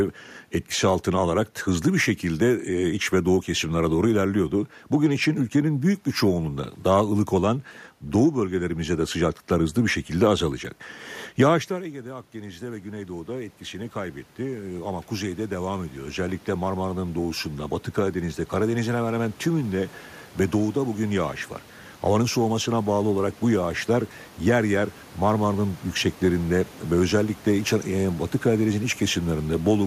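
At about 11.5 s the talker moves away from the microphone and the input drops by about 16 dB. From 11.69 s to 17.45 s the automatic gain rising fault follows: the gain control registers the quieter input and lifts its gain by about 11 dB over nearly six seconds. The voice swells back up slowly, and the room noise rises with it in step, so the background becomes audibly louder behind the speech.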